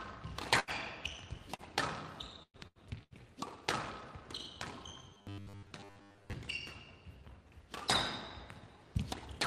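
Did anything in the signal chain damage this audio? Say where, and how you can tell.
Yes. From 0.59 to 0.70 s the sound turns into a held, fading continuation of itself, then resumes with about 80 ms missing. This is a burst of packet loss at the network stage. Consecutive packets never arrived, and the receiver stretched and attenuated the last sound across the hole.

At 1.55 to 1.62 s there is a brief smear where roughly 40 ms drops out. This is short concealed packet loss on the network. The decoder covered the small hole by extrapolating the preceding sound for about 33 ms, then blended back into the real signal.

Between 2.43 and 3.14 s the audio goes choppy and robotic, with pieces missing. This is repeated packet loss (robotic sound) on the network. Four separate gaps, the longest 110 ms, were each patched by continuation, so about 38% of that stretch is filled rather than real.

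From 5.10 to 6.34 s a rigid, metallic 100 Hz buzz rides over the sound, with most of the real audio replaced. This is robotic sound from repeated short buffers, likely a driver or buffer underrun repeating the last 10 ms block, which fits that buzz pitch.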